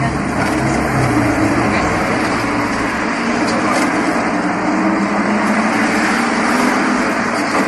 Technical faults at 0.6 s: generation loss

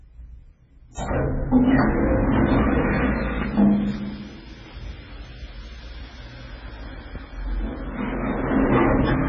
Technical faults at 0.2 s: MP3 compression

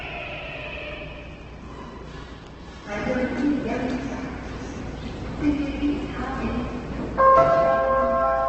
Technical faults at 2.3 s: Opus compression

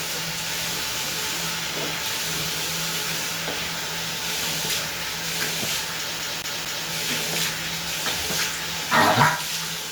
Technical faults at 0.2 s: none

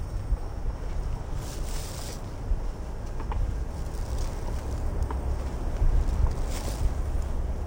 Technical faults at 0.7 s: stereo read as mono

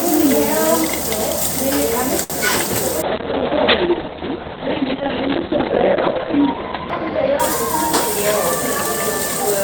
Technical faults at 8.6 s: call bitrate drop

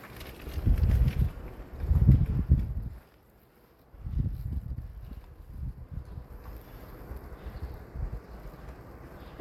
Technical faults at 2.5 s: zipper noise

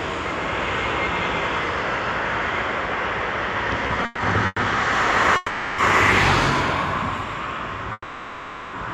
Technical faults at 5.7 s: doubled audio track; call audio freeze

